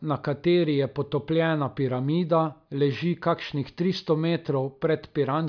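Listening closely to the speech, nothing stood out as a technical fault at any point.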